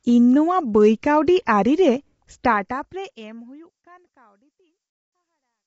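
Throughout, the speech sounds grainy, likely from low-delay AAC compression at a bitrate that fits 24 kbps. On a spectrogram, noise fills the gaps between harmonics and everything stops at 7.7 kHz. The smooth fade out from about 2.5 s to 5.67 s shows as a gradually tapering waveform envelope.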